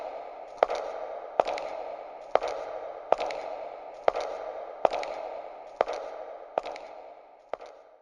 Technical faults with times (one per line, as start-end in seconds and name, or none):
0.57-0.60 repeated frames